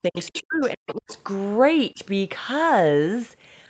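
From 0.02 to 1.1 s the talker is pushed down in pieces, around 0.7 s in total and at worst by about 40 dB. This is speech suppressed in double talk, likely an echo canceller ducking both voices at once. Unlike a network dropout, it tracks the other party's activity.

Around that stretch, at 0.16 to 0.42 s, 0.61 to 0.68 s and 0.9 to 1.19 s, the other side's voice leaks through as a second voice about 20 to 25 dB below the talker. This is most likely loudspeaker echo the canceller failed to remove. It is a distinct voice, not a repeat of the talker's own sound, and that sets it apart from a delayed self-echo.

A brief second suppression from 1.94 to 2.0 s takes the talker down by about 10 dB for about 70 ms, the same double-talk ducking as before but much shallower.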